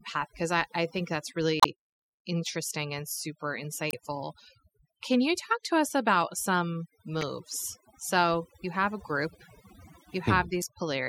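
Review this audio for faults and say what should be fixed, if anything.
Overdone noise removal runs through the whole speech clip. The suppressor pulls individual frequency bands down whenever they sit close to its noise estimate, so the background drops and breaks up into twinkling specks, while softer parts of the voice are cut with it. Unlike ordinary lossy-codec smearing, the artefacts follow the noise floor and fluctuate in the pauses. Use gentler reduction settings, or clean up the noise at the source.

Damaged data in a compressed stream produces four short blips: 1.60–1.66 s, between "I I think that's" and "interesting and", where about 2.1 ms of time is also added; 3.90–3.94 s; 7.21–7.23 s, just after "to us about some"; and 10.61–10.64 s. At each one the decoder hit corrupt bytes, lost frame sync and resumed at the next header. Packet-loss concealment would give smoother fills instead of these glitches. 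Protect the file or stream with checksums and error-resilient transport.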